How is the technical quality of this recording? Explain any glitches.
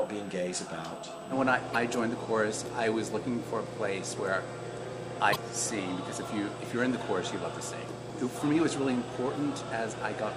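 The recording has two technical problems: a constant high-pitched whine and two brief decoding glitches.

A USB whine runs through the whole clip. It is a fixed tone based on 8 kHz, with its strongest component at the 16 kHz harmonic, sitting roughly 25 dB below the signal. The USB bus pulls current in 125-microsecond microframes, which repeat 8,000 times a second. That periodic load leaks into the audio through shared power or ground and comes out as a thin, steady, very high whistle.

Damaged data in a compressed stream causes two short glitches, from 1.71 to 1.76 s and from 5.32 to 5.36 s, each about 44 ms long. At those points part of the encoded stream is corrupt. The decoder misreads or rejects the affected frames, loses sync and hunts for the next valid frame header before playback resumes. Each one is heard as a quick chirp or blip that breaks into the audio.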